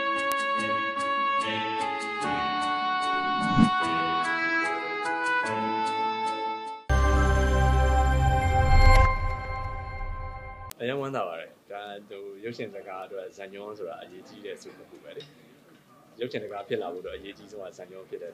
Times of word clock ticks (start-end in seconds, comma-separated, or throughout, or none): 0.32-17.64